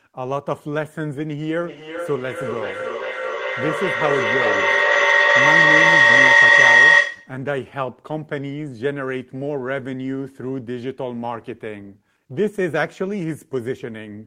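A speech recording with feedback howl from 1.6 to 7.42 s: two devices in the room share the call, and each pass through the loop adds level until a tone near 2 kHz peaks about 12 dB above the speech, pulsing roughly every 400 ms. A spectrogram shows a bright horizontal band there, and the waveform swells in periodic bursts.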